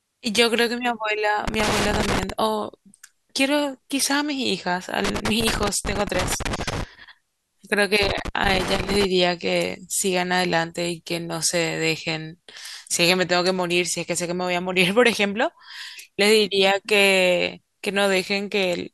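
Speech with loose connector crackle in three bursts, from 1.48 to 2.30 s, 5.05 to 6.84 s and 8.03 to 9.05 s. A worn or dirty contact is intermittently opening and closing, chopping the signal into scratchy crackle. Unlike digital dropouts, which leave clean gaps, these bursts are ragged and irregular, and they don't track loudness the way clipping distortion does.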